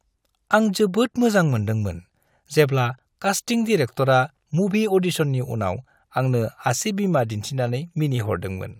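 Speech recording, with no technical faults to be heard.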